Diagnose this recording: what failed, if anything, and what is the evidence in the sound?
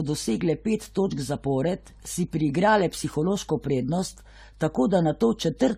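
Generation loss in the codec stage runs through the whole speech clip. The sound is swirly, smeared and hollow, and consonant attacks blur, more than a single encode would explain. The character points to AAC-LC at around 64 kbit/s, likely re-encoded about five times. Each pass requantises on a shifted frame grid, so noise and spectral gaps accumulate. A spectrogram would show a hard ceiling at 16.5 kHz, holes scattered through the bands below it, and smeared onsets.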